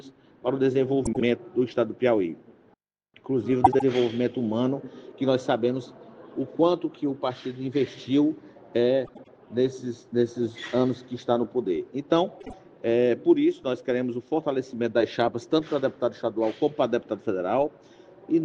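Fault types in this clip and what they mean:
frames out of order: short garbled flutters near 1.05, 3.64, 9.05 and 12.40 s, where neighbouring runs of frames play swapped.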